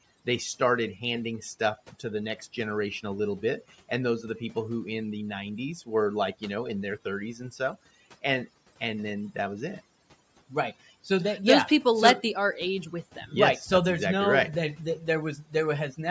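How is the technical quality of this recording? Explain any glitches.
The technical quality is held back by overdone noise removal, present for the whole of this speech recording. A noise reduction stage was set far too aggressively for the room noise, which sits about 28 dB below the speech. Any frequency band that drifts close to the tool's noise estimate is pushed down hard or switched off entirely, and the quieter parts of the voice get caught along with it. The result is a background that drops away, dotted with small twinkling specks where isolated bands flicker on and off. The call microphone processing can also be heard trimming the lowest bass, with nothing above 8 kHz.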